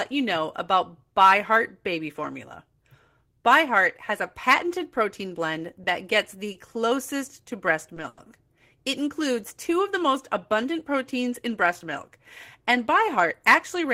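From 6.40 to 7.57 s there is a jitter buffer slow-down. The receiver's buffer ran low, so it repeated single pitch periods to build a reserve. This adds 41 ms and runs the speech at 97% speed. Pitch holds steady, and sounds drag slightly.

Inside that stretch, at 6.52 to 6.57 s, comes a short stall from a late packet. Two more follow, at 7.94 to 7.99 s and 8.08 to 8.20 s. Each time a packet arrived late and the buffer ran dry. The last sound was stretched, by 20 ms, 20 ms and then 90 ms, before playback resumed. Nothing is lost. A sound simply hangs.

From 13.18 to 13.85 s there is a jitter buffer speed-up. Too much audio had built up, so the receiver cut short pitch-period pieces, roughly 50 ms in all. The speech runs at 108% speed with unchanged pitch. It sounds hurried.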